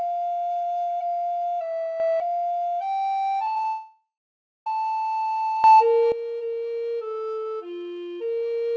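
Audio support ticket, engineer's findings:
Sudden gain jump at 2.0–2.2 s and 5.64–6.12 s. Likely a digital gain step applied without a ramp. Level rises about 6 dB, then about 12 dB, with the background noise jumping together with the sound, abrupt rather than faded.

Repeated packet loss (robotic sound), 3.45–3.65 s. Packets repeatedly lost or late in the jitter buffer. Each hole is patched by extending the preceding audio. Four short holes, longest about 17 ms, concealment covering a quarter of the stretch. The result is choppy, with pieces missing.

Long network dropout, 3.67–4.67 s. About one second of audio never arrived, likely a network outage. Concealment first stretches the last sound into a fading buzz or hiss, then leaves roughly 0.58 s of silence before audio resumes with the lost portion gone. The G.722 call path band-limits everything to 8 kHz.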